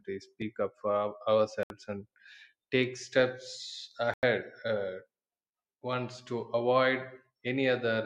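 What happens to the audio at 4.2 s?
Just after "take steps", the speech cuts out from 4.14 to 4.23 s. That is a gap of about 93 ms of silence with abrupt or briefly faded edges. When the sound returns, it has moved on, as if it kept playing underneath. This is most likely a Bluetooth dropout. Audio packets failed to reach the headphones in time and were thrown away. The length fits roughly four lost packets, and the output stays silent until good data arrives again.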